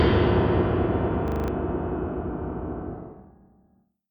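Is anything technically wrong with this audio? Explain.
Yes. From 1.28 to 1.48 s the sound sticks: a single 40 ms fragment repeats five times in a row, producing a rapid stutter at 25 Hz. This is a system hang loop. The computer or audio driver briefly froze while the playback hardware kept cycling through the same ring buffer, replaying stale data until it recovered. About a fifth of a second of the actual sound is lost and replaced by this repetition.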